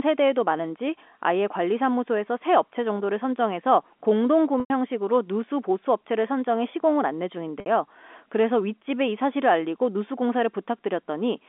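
At 4.6 s there's packet loss with pitch repetition. About 100 ms of audio goes missing, up to 4.70 s, which fits a run of several 20 ms packets. The receiver covers the hole by looping the last pitch period, so you get a brief held, buzzy tone that fades down before the speech cross-fades back in. It happens again at 7.6 s, this time 60 ms to 7.66 s, so it's a shorter gap with a brief held buzz. All of this comes through a narrow 250 Hz to 3.5 kHz G.711 telephone band.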